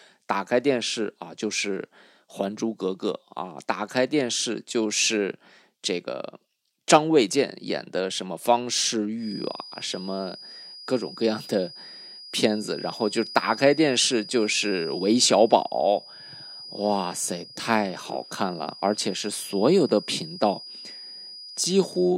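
A speech clip with a thin, steady whistle near 4.9 kHz entering at 9.15 s and sounding to the end, sitting roughly 20 dB below the speech and swelling and fading slowly in level. This feedback whistle likely comes from a loudspeaker-to-microphone loop held just at the edge of feedback, sustaining one frequency without building up.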